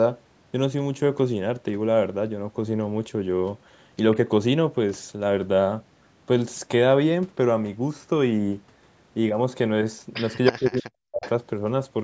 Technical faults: echo leak; speech suppressed in double talk

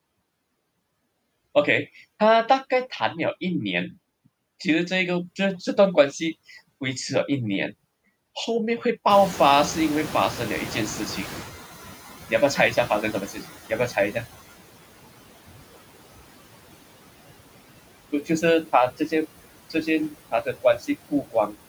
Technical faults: noise suppressor artifacts; noise suppressor catching up; speech cut by the noise suppressor

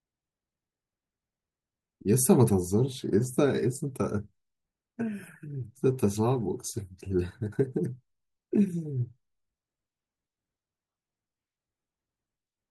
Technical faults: none

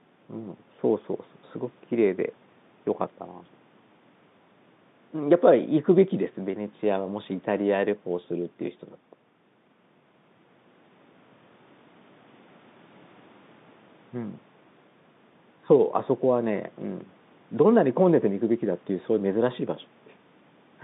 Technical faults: none

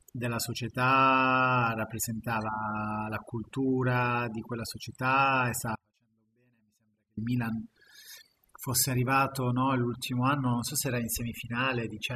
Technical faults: overdone noise removal; audio dropout to a faint residue

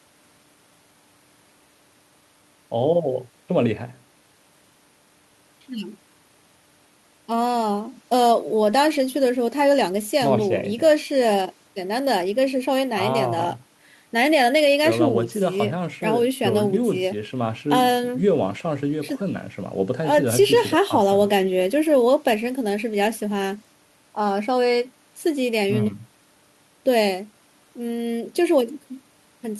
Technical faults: none

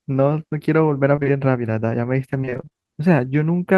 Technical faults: short concealed packet loss; repeated packet loss (robotic sound)

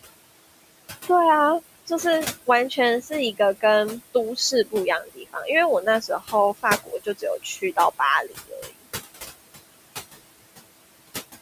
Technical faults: noise suppressor artifacts; speech cut by the noise suppressor

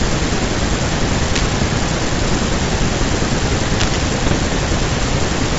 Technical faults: cable scratch noise; bit errors on an ADPCM link

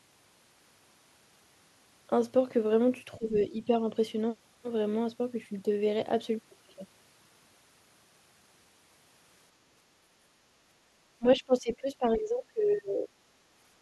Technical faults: speech suppressed in double talk

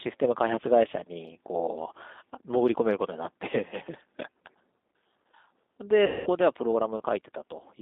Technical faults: G.729 codec; VoIP packet loss concealed by the speech codec

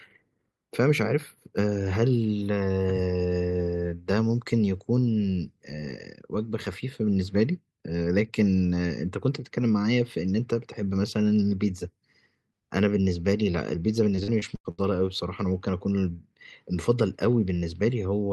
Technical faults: repeated packet loss (robotic sound)

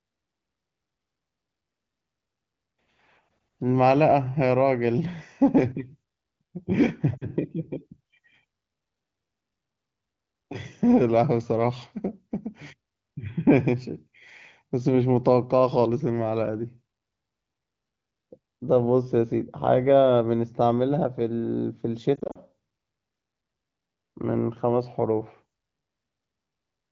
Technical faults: lost AMR speech frames

